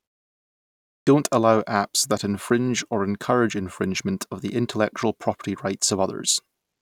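Clipped start after a pause, at 0.89 s: after nearly 0.9 s of silence, the output path needed time to wake and lock again, so about 179 ms was swallowed. The sound leading into "allow apps that infringe" bursts abruptly out of silence, missing its opening.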